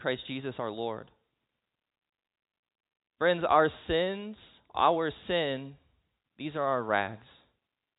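A speech recording with nothing technically wrong to report, so there are no times or causes to give.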